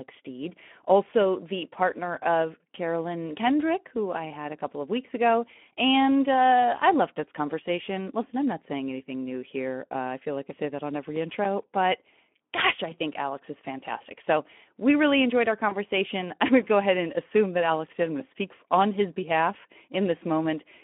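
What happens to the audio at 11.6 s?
At 11.6 s the audio is inside a burst of CD scratch ticks running from 11.16 to 11.73 s. A blemish on the disc destroys more data than error correction can rebuild, once per revolution, and the player patches the gap. The result is five short ticks of a few milliseconds each. They are evenly spaced. That regular rotational rhythm is what separates them from random digital clicks or packet dropouts.

Underneath, and throughout the clip, the speech carries Speex codec damage at 11 kbps, confined to a 200 Hz to 3.4 kHz line band. With few bits left for the excitation, the speech sounds plainly hoarse and noisy. That grainy roughness, rather than the warbly, swirling artefacts of transform codecs, marks it as CELP coding.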